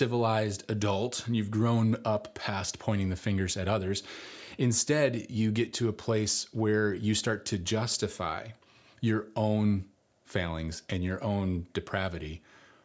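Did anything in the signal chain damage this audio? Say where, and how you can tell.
No, nothing in this speech recording stood out on listening as damage from any stage of the signal chain.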